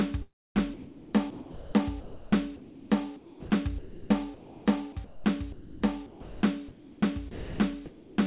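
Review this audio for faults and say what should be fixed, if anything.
Sound chopped by the voice detector at 0.22–1.74, 2.00–2.90, 3.78–4.66, 5.52–6.42 and 7.31–8.25 s. The music flickers between real sound and synthetic comfort noise, likely from a detector repeatedly switching transmission off.

Sound dropped by the voice detector at 3.16–3.50, 5.04–5.24 and 6.68–7.02 s. Quiet music gives way to steady noise until sending resumes, likely because the detector mistook it for background.

The call path's narrow band leaves nothing above 4 kHz. To fix them, disable voice activity detection and discontinuous transmission for music, or set a music mode on the sender.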